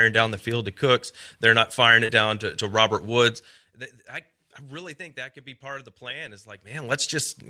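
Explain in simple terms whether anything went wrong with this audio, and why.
Right after "not firing", from 2.05 to 2.12 s, the speech briefly smears and wobbles before "down to to". This is short concealed packet loss: about 40 ms of audio arrived too late, and the receiver papered over the gap by stretching the preceding sound.

Inside that same moment, from 2.09 to 2.11 s, the audio turns rougher and noisier. This is a lost packet rebuilt from error correction: a 20 ms piece was restored from a lower-quality backup copy carried in the next packet.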